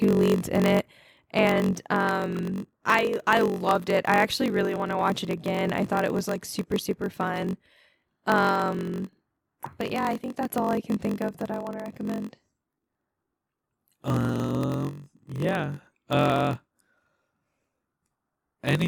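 Throughout, a block size mismatch (padded) zero-fills each short block, causing a 46.9 Hz buzz and slowing the speech to 0.938 speed with its timbre intact.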